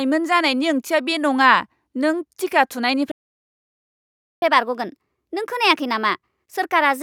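At 3.11 s the speech cuts off mid-flow and the output falls silent for about 1.3 s, until 4.42 s. This is a playback stall, most likely the player running dry of buffered data or its output thread being blocked. On a waveform the signal drops abruptly to a flat line with no fade. The spectrogram shows a clean vertical edge into a fully empty band across all frequencies, then an equally sharp restart.

From 4.42 s to the end, the player runs a catch-up at higher speed. It resamples its backlog at 1.15 times normal rate to recover the lost time, so the speech sounds hurried and lifted in pitch by about two semitones. The spectrogram shows harmonics and formant bands shifted upward and syllables packed closer together. On the waveform, envelope peaks are spaced tighter than before the gap.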